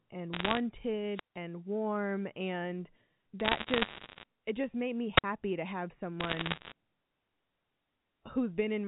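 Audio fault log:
0.33 to 0.59 s, 3.4 to 4.24 s (after "warm and", up to "it just made me") and 6.2 to 6.72 s (after "to have"): bit errors on a digital phone line. Scattered flipped bits corrupt single samples, so you get sharp ticks and a crackly layer over speech that's otherwise untouched. At around one error per hundred bits, the middle and last stretches are the densest.
1.08 to 1.42 s and 5.16 to 5.24 s (after "it just made me", before "to have"): wireless microphone squelch dropout. The radio link fades, hiss swells, then the receiver mutes for about 162 ms and 53 ms respectively before the sound comes back.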